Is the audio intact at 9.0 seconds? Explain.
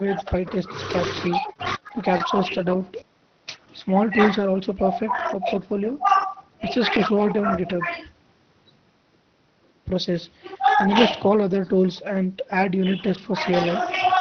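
Yes, the speech at 9.0 seconds is intact, with no dropout, glitch or other fault at that moment.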